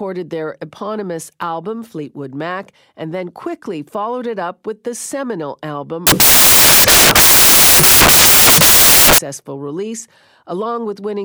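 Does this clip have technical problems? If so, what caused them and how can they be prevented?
Yes. From 6.07 to 9.18 s, samples built from the wrong bytes: misaligned or swapped byte order promotes the noisy low bits, turning the speech into loud, harsh broadband noise, close to white on loud sounds. Checking the declared byte order and alignment of the sample data before decoding would prevent it.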